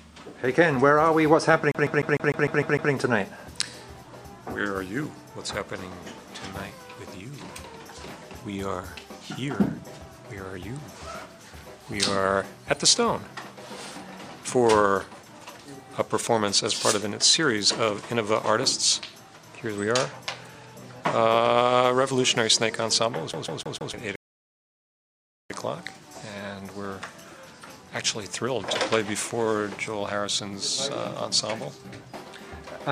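From 1.72 to 2.93 s the audio gets caught in a CD stuck on one turn. A scratch keeps throwing the laser back one track at the same point on each revolution, so the same 151 ms of sound plays eight times, each with a brief mute at the jump. It is a rapid, even stutter. On the waveform it shows as an identical block repeated, with tiny gaps between copies, and the spectrogram shows the same vertical pattern tiled at a steady spacing. The fault returns from 23.33 to 23.94 s with the same 151 ms loop, this time repeating four times.

Just after, at 24.16 s, a rebuffering stall cuts the sound to silence until 25.50 s. The player ran out of downloaded audio and waited for more, then picked up exactly where it stopped. No sound is lost, but about 1.34 s is added. It appears as a flat line on the waveform and an empty column on the spectrogram, with matching content on either side.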